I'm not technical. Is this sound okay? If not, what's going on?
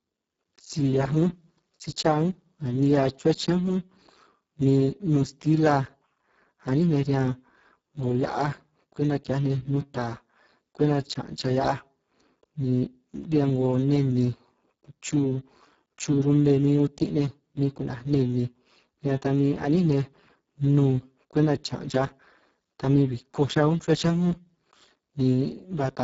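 No. For the whole clip, the speech was squeezed through the Speex codec, an older voice-compression method from internet calls and game chat, set to a very low quality. At that setting it keeps only a rough outline of each sound, so the speech from start to finish comes out noisy and hoarse, edging toward robotic. The crisp top end is largely fake filler, and above about 7.7 kHz there is nothing at all.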